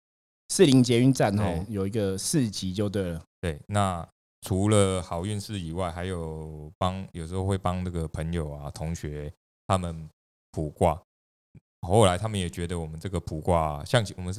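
No technical faults are audible anywhere in the recording.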